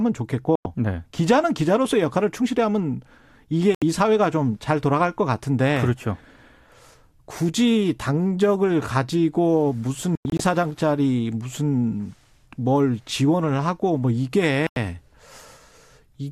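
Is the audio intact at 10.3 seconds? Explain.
No. At 10.3 s the speech falls inside a digital broadcast dropout from 10.15 to 10.40 s. Frames stopped arriving intact, so the receiver muted until good ones returned. The speech breaks into short silent holes totalling 144 ms, the longest 96 ms, and that audio is lost.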